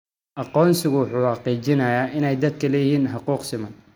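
No faults turn up anywhere in the recording: no dropouts, no discontinuities, no level or timing problems.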